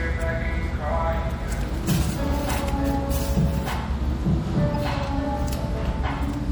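Throughout, the sound has a watery, swirling quality with smeared attacks and dulled treble, plainly audible and most likely MP3 compression at a low bitrate, around 64 kbps. With bits this scarce, the encoder cuts high frequencies at a fixed ceiling and drops weak spectral lines that flicker between frames. A spectrogram would show a flat upper cutoff and patchy, blinking high-frequency detail.

At 4.75 s, a corrupt frame decoded produces a brief chirp or blip. Damaged bits in one compressed frame made the decoder place energy at wrong frequencies for that frame's duration. On a spectrogram, this appears as a narrow, misplaced smudge, peaking at about -25 dBFS.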